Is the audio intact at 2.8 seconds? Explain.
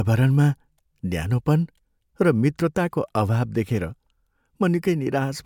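Yes, the audio is intact at 2.8 seconds: the speech there plays through with no dropout, click, distortion or other technical fault.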